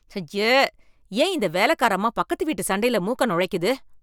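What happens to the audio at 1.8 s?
Nothing goes wrong at 1.8 s; the speech passes through that moment intact, with no dropout, click or distortion.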